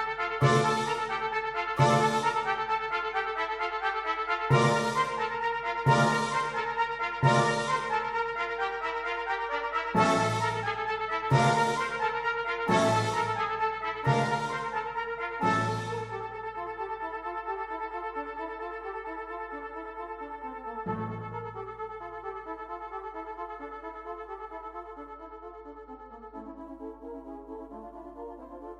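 A ground loop or nearby transformer couples the 50 Hz power line into the signal for the whole clip, giving a steady low mains hum roughly 30 dB below the audio. From 6.22 to 9.08 s and again from 25.12 to 26.61 s, a congested link forces a Bluetooth SBC bit pool drop. The treble dulls and gritty quantisation noise rises, which fits a fall from bit pool 31 to about 15, near 105 kbps.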